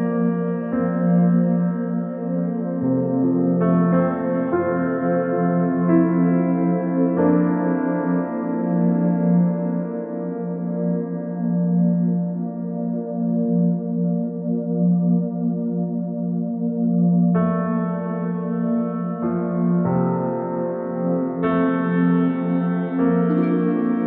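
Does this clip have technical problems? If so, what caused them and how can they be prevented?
No, there are no technical problems to report.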